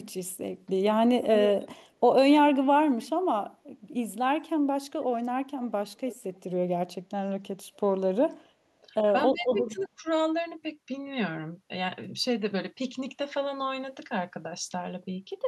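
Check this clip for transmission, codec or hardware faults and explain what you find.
Two faults are audible, both from echo control at a far end that is playing the call on a loudspeaker.

Echo leak, from 5.99 to 6.16 s and from 9.79 to 9.87 s: brief, faint delayed copies of the speech arrive 289 ms after the original, at roughly 20 dB and then 30 dB below it. The likely cause is an echo canceller that let some of the loudspeaker sound its microphone picked up pass back down the line. A fixed delay and a weak level like this separate it from room reverberation, which would trail off smoothly rather than repeat.

Speech suppressed in double talk, from 9.32 to 10.06 s: the speech dips by up to around 20 dB in pieces over about 0.7 s while both sides overlap, with an echo scrap inside that window. The likely cause is the canceller failing to tell the talker from loudspeaker echo and attenuating both. 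It differs from a network dropout because it tracks the overlap and leaves faint residue rather than falling to clean silence.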